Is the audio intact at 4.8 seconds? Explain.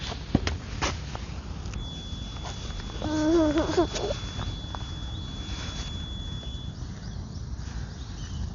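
No. A feedback whistle runs from 1.71 to 6.79 s: a steady 3.4 kHz tone sitting roughly 15 dB below the sound, likely a speaker-to-microphone loop held just short of runaway. Throughout, the audio is dull with nothing above 7 kHz and rough, fluttering noise, likely from heavy Dolby Digital compression at a bitrate near 48 kbps.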